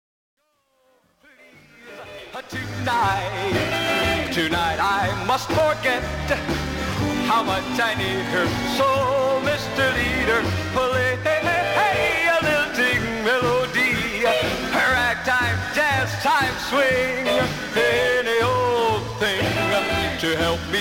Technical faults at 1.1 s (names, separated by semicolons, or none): truncation distortion on a fade